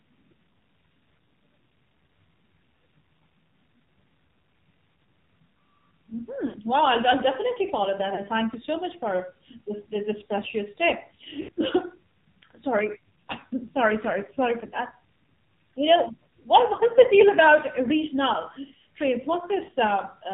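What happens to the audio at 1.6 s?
At 1.6 s the speech carries AMR narrowband mobile codec damage, present across the whole clip. Nothing passes above 4 kHz, a flat ceiling on a spectrogram, and the sparse vocal-tract model makes the voice heavily buzzy and synthetic, which fits a rate near 6 kbps.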